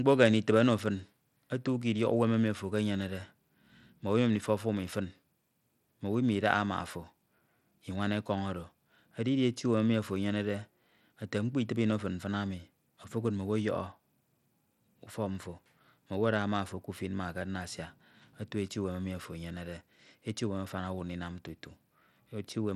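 Bluetooth SBC compression runs through the whole speech clip, with plainly audible codec damage from start to finish. The sub-band coder has likely been squeezed to a small bit budget, one that fits roughly 96 kbps, so the upper bands get too few bits and the rest are coarsely quantised. The treble flickers and thins, gritty noise and aliasing ride on the speech, and nothing is left above 19.4 kHz.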